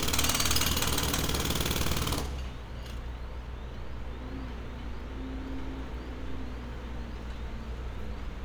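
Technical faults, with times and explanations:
No technical faults can be heard anywhere in the recording, and the signal stays intact throughout.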